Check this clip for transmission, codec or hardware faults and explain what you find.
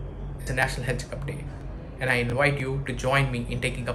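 There are two problems, both dropout-type glitches.

Bluetooth stutter shows up at 0.42–0.47 s and again at 2.30–2.33 s. When packets arrive late or get lost, the receiver replays its last slice of audio. The first is about 46 ms of repeats, which fits two lost packets, and the second is about 23 ms, which fits one. Each sounds like a brief buzzy stutter before the audio picks up further along.

Audio missing between chunks happens at 0.63, 1.61, 2.60 and 3.59 s, roughly once a second. Each is a tiny skip where a sliver of sound vanishes and the two sides butt together. The steady one-second spacing likely comes from a recorder or processor dropping a bit at each chunk boundary.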